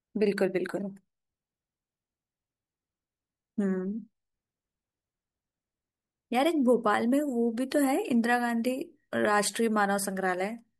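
No technical faults can be heard anywhere in the speech recording.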